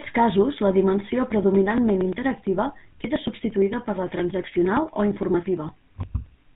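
GSM full-rate codec damage runs through the whole of this speech clip. The sound is plainly band-limited, with nothing above 4 kHz, and carries the buzzy, gravelly roughness of the original GSM vocoder. That codec rebuilds the voice from a vocal-tract filter driven by a coarse, regularly spaced pulse excitation, keeping only every third excitation sample, which fits a 13 kbps full-rate stream. Periodic USB or driver dropouts run from 1.32 s to 6.49 s. Audio drops out every 0.115 s, about ten milliseconds at a time. The missing audio is skipped rather than filled with silence, so the signal jumps forward at each gap, roughly fifty times in all, with a tick wherever the gap falls during speech. The steady spacing points to a background task that stalls the USB bus or audio driver at a fixed interval and starves the stream.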